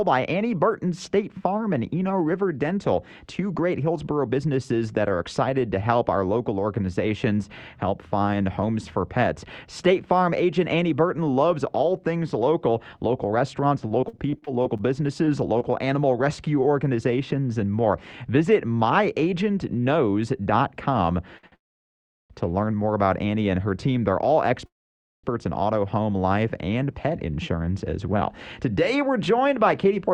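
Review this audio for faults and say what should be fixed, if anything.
Repeated packet loss (robotic sound) runs from 13.87 to 15.62 s. Packets went missing or arrived too late again and again, and the receiver filled each hole by extending the last sound it had. There are eleven short holes, the longest about 43 ms, and about 15 percent of that stretch is concealment. It comes out choppy, with around 160 ms of audio lost altogether. Forward error correction or redundant packets on that link would recover most of these holes.

A short stall from a late packet happens at 21.38 s and again at 21.47 s. Each time a packet was not there when due, the jitter buffer ran dry, and the receiver held the last sound for about 53 ms and then about 48 ms until the packet showed up. Playback then resumed from the same spot, so nothing is lost. You hear a brief held sound with a slight buzz or dip. A jitter buffer with a little more target depth would absorb delays this small.

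Call audio freeze occurs from 21.56 to 22.32 s and from 24.66 to 25.26 s, most likely because packets were held up in transit long enough to empty the jitter buffer. The last sound trails off into near silence, about 720 ms of it in the first freeze and about 540 ms in the second, before the audio carries on where it stopped. Nothing is missing, but real gaps are inserted. Finding the network path that delays packets by over half a second is the fix here.

Jitter buffer speed-up runs from 26.91 s to the end at 30.13 s. After the freezes, the buffer was holding more audio than its target. To bring the delay back down, the receiver repeatedly cut out pitch-period-sized slices, about 300 ms in total. Playback runs at about 110 percent speed with unchanged pitch, so it sounds hurried. Draining the excess more gradually, or fixing the upstream delay spikes, would avoid this catch-up rush.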